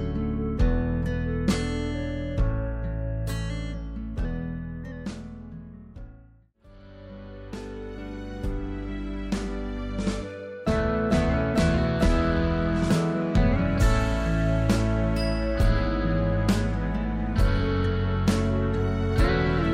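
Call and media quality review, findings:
No audible faults found on review; no dropouts, glitches or level anomalies detected in the recording.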